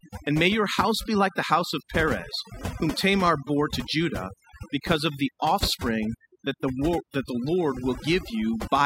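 Across the whole recording the background drops, with pauses collapsing into near silence dotted with twinkling specks. That is overdone noise removal: a reduction stage set too hard muted individual frequency bands near its noise estimate, taking quieter speech detail with them.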